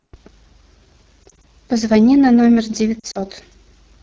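Throughout, the speech carries the sound of the AMR wideband (HD Voice) codec. It models the voice with pulses through a vocal tract filter. The top band is only shaped noise. Here the damage is plainly audible, a rough, raspy texture that fits one of the lowest modes, around 8.85 kbit/s.

From 1.23 to 1.45 s there are lost AMR speech frames. Short gaps are spread across about 200 ms. The decoder patches each one by reusing the last good pitch and vocal tract settings at falling gain. Each gap is brief, giving small dips and warbles. From 3.00 to 3.19 s a similar cluster spans about 160 ms. Its longest gap runs about 40 ms, long enough for the sound to smear and sag before the speech returns.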